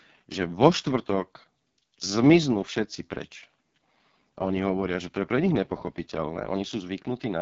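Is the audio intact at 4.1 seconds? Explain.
No. At 4.1 seconds, as across the whole clip, the speech carries AMR wideband (HD Voice) codec damage, and it is heavy. The coder models the vocal tract and drives it with sparse pulses, so here the voice sounds rough and raspy, which fits the lowest 6.6 kbit/s rate. Nothing remains above 7.5 kHz. The band still reaches well past the 3.4 kHz limit of narrowband telephony, which marks this as a wideband codec rather than an ordinary phone line.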